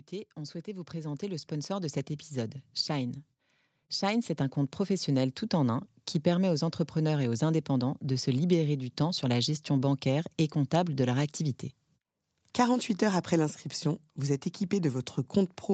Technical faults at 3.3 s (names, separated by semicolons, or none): automatic gain rising